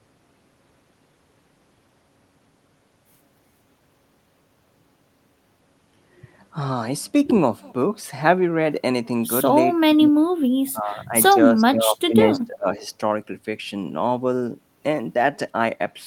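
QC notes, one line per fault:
9.69–10.14 s, 10.72–11.14 s, 11.55–12.86 s: speech suppressed in double talk. The speech repeatedly dips, by roughly 25 dB, 15 dB and 25 dB, across about a third of a second, 0.4 seconds and a full second. This is likely an echo canceller attenuating the near talker during overlap.
12.81–12.86 s: echo leak. A brief, faint copy of the speech arrives 348 ms late at about 35 dB below the direct sound. This is likely residual loudspeaker pickup that the far-end echo canceller failed to remove and sent back.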